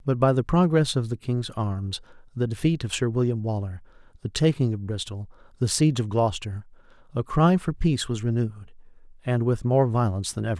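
Speech recording with no audible technical faults: no dropouts, level problems or signal-chain errors anywhere in the clip.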